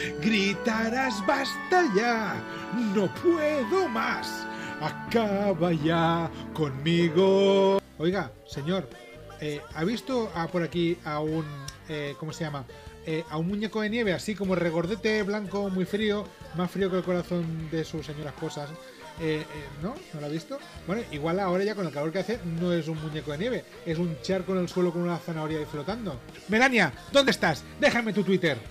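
No technical faults can be heard anywhere in the recording. There is nothing to place on a timeline or explain.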